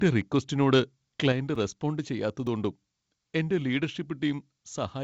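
At 1.32 s the speech drops in level by about 4 dB in a single step. Speech and background fall together. This is a microphone volume stepped down. The likely cause is the call software judging the input too hot and lowering the device's input volume at once. It sounds like the whole sound moving slightly further away, abruptly rather than with a fade.

Two blocks of digital silence follow. The first starts at 1.55 s and lasts 5.8 ms, which fits a 256-sample block. The second, at 2.47 s, lasts 1.45 ms, which fits a 64-sample block. In each, the signal is replaced by zeros, probably because an output buffer was not filled in time. The audio cuts to nothing and back with no fade. The longer gap is heard as a tick or dip. The shorter one is also heard as a tick or dip. Above 8 kHz the clip is empty, as expected from the G.722 call path it went through.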